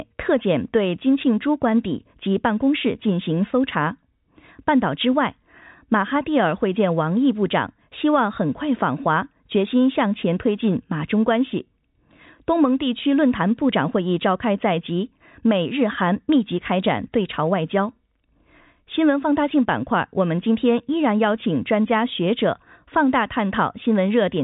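From 2.06 to 6.16 s the speech carries periodic USB or driver dropouts: about five ticks spaced exactly 1.02 s apart, each where a sliver of audio, a small fraction of a millisecond, was skipped rather than filled with silence. That strict clock-like spacing, unrelated to what is being said, marks a host process stalling the audio path, unlike random packet-loss gaps. The ticks are heard against telephone-band sound that ends near 3.8 kHz.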